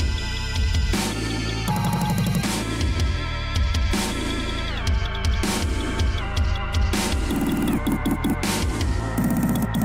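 No technical faults are audible.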